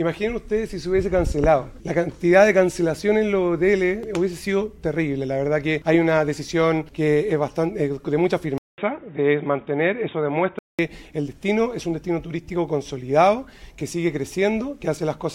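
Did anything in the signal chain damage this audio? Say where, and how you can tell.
Yes. From 8.58 s to 10.79 s the sound goes dull and boxy, with nothing above 3.8 kHz. It opens with about 200 ms of silence. The level stays roughly the same, but there's a new, faint noise floor, around 45 dB down, that wasn't there before. That points to the input switched to a poorer device at the driver level, likely a fallback mic or a headset call profile, before it snaps back.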